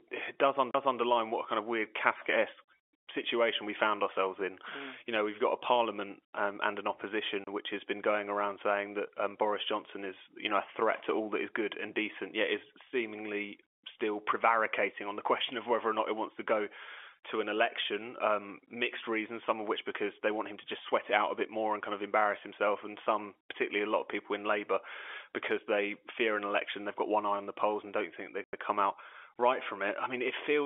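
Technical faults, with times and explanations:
0.71 to 0.75 s: CD skip. The laser jumped to another turn of the disc's spiral. Playback mutes for roughly 40 ms and resumes from a different point. The sound lurches instead of flowing on.
7.44 to 7.47 s and 28.44 to 28.53 s: packet loss filled with silence. The receiver put silence in place of missing data. The speech breaks off with hard edges. The gaps last 30 ms and 90 ms, which fits a 30 ms packet lost once and then three times. The narrow telephone band of the G.711 line stays audible around them.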